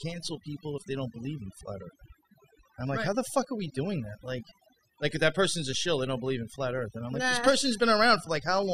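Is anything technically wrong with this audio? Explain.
Yes. Throughout the speech there is overdone noise removal: a noise reduction stage was pushed far too hard, cutting individual frequency bands down or out whenever their level sat close to its noise estimate. Because the quieter parts of the voice fall in that same range, they were stripped away along with the noise. The result is a background of near silence dotted with twinkling, chirpy specks.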